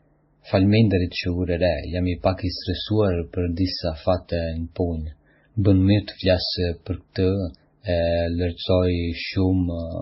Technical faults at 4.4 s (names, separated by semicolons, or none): transcoding between lossy codecs